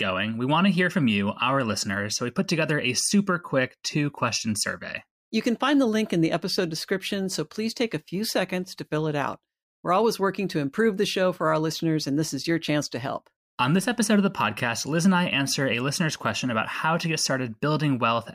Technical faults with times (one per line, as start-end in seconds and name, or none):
none